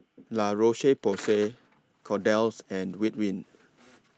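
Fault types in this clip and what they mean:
No faults can be heard in this speech recording.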